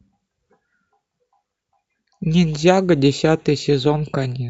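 Weak DAB reception let bit errors of well under one percent slip past error correction into the MP2 data at 3.21 s, corrupting samples so single sub-bands get short blips of noise, producing a brief DAB burbling over the speech.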